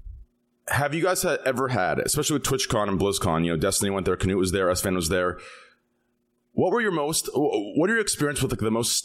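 A short bit of speech, and nothing in it stands out as a technical fault anywhere along the way.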